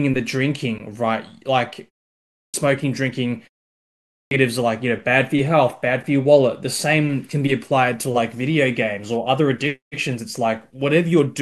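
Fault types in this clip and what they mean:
Clipped start after a pause: at 2.14 s and 3.97 s, speech resumes abruptly with its opening sounds missing. About 0.40 s and 0.34 s are swallowed after pauses of 0.32 s and 0.57 s, while the idle output device wakes and locks again.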